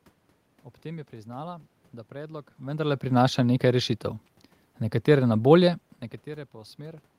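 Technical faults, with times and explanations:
No technical faults are present in this clip.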